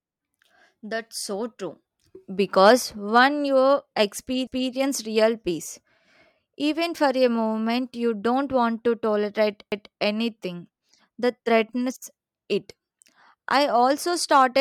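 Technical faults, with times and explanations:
4.47–4.72 s and 9.72–9.97 s, overlapping chunks: the speech is handled in blocks of 5.0 s, and each block begins 250 ms before the previous one ended, so a quarter-second is heard twice, just before "real peace" and between "don't want to tolerate" and "anything that threatens it". It sounds like a stutter or click at the seam. The waveform shows a repeated 250 ms segment, and the spectrogram shows duplicated patterns with a vertical discontinuity line at each join.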